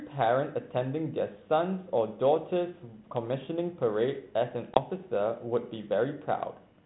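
At 4.74 s the speech drops into a hard-edged silent gap of roughly 20 ms, with the disturbance over by about 4.78 s, which fits one lost packet on an ADPCM call. Because ADPCM sends only differences from an adaptive prediction, the receiving decoder's predictor and step size no longer match the sender's once that packet is gone. The speech resumes slightly distorted, settling within some tens of milliseconds.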